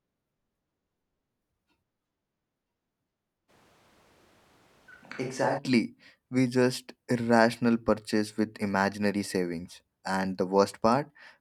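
A speech recording with one fault. From 3.5 s to 5.57 s the voice suddenly turns roomy and hollow. The bass thins out. The level drops by roughly 5 dB. Room noise rises to about 30 dB below the speech. At 5.57 s the close, full sound returns just as abruptly. This is likely a switch to a distant microphone, with the close microphone's signal lost for that stretch. A camera or room microphone fills the gap.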